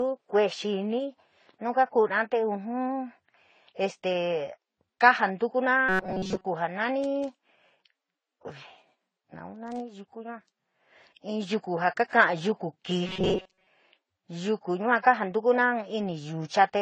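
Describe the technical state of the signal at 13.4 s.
Audio data was likely arriving too slowly between 13.07 and 13.67 s, so the player kept looping a short buffer of about 5.3 ms while most of the real signal was skipped. This is robotic sound from repeated short buffers: a rigid, metallic buzz locked at 188 Hz that only roughly tracks the speech.

Throughout, the signal shows transcoding between lossy codecs, most likely a low-rate Vorbis encode followed by an AAC-LC encode at a similar low rate. The two sets of compression artefacts are heard layered together, and the lowest bandwidth cut-off in the chain remains.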